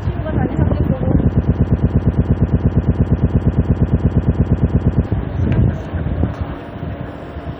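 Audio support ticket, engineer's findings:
Broken-record loop, 1.36 to 5.07 s. A 116 ms fragment repeats 32 times. Likely stalled player or stream resending its last fragment. Span's audio lost.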